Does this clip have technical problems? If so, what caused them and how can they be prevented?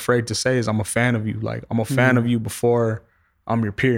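No, this recording has no technical problems to fix.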